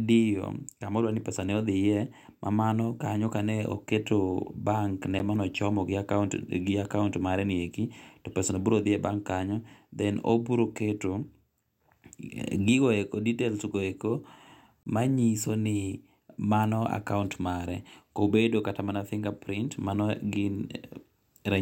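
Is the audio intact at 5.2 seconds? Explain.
No. A block of digital silence sits at 5.19 s, between "kane oketo bank ne" and "mane ochomo gi". For about 10 ms the audio drops to silence, most likely because the output buffer wasn't filled in time. With no fade in or out, the waveform jumps straight to silence and back, putting a sharp edge on each side. With a hole this brief, the two edges merge into a single tick or dip in the speech.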